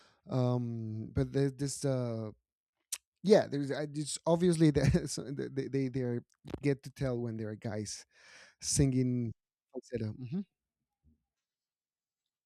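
A speech recording, with nothing technically wrong to report.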